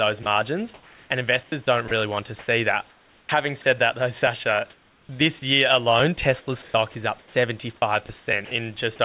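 At 0.23 to 0.26 s, 30 ms of speech is lost as sound dropped by the voice detector, likely because it mistook the speech for background. On the waveform it shows as a small flat notch of low, even noise.

From 1.43 to 3.65 s, just before "that though", the speech is chopped by the voice detector. About 660 ms of speech is swapped for comfort noise, likely from rapid send/stop switching. The spectrogram shows harmonics breaking into hissy gaps.

The same choppiness returns from 4.19 to 5.09 s, between "that though" and "year alone". There, about 420 ms is replaced, likely by comfort noise, giving a stuttering waveform envelope.

From 6.62 to 7.34 s, comfort noise stands in place of the background, likely because transmission paused. For about 270 ms the real room texture becomes a smooth, featureless band-limited wash below 4 kHz.

From 8.06 to 8.51 s, the sound is chopped by the voice detector again. 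About 180 ms of speech is likely filled with synthetic noise, which shows as short uniform patches breaking the speech trace.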